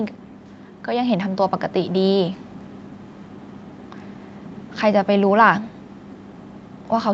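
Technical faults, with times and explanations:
0.87–2.46 s, automatic gain rising: the call's automatic gain control judged the input too quiet and raised its gain gradually, by about 4 dB over roughly a second and a half. Because that gain is applied to the whole microphone signal, the speech and the background beneath it swell together, so the overall level creeps upward while the sound itself stays the same, still topping out near 8 kHz as the call path allows.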